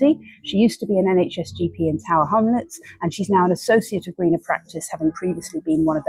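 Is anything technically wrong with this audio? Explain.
Yes. A call bitrate drop runs from 2.28 to 4.21 s. The encoder was forced from what sounds like around 64 kbps down to roughly 28 kbps for about 1.9 s, so it codes the audio more coarsely, leaving it rough and watery until the rate recovers.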